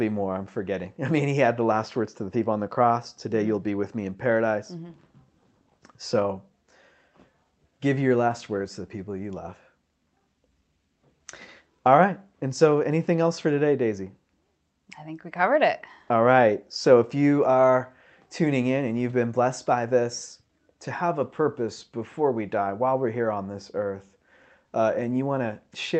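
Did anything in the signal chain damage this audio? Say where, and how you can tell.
No, no damage is evident.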